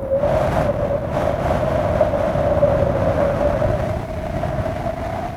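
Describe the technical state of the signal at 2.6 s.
At 2.6 s the signal is intact, with no audible fault in the sound at that moment.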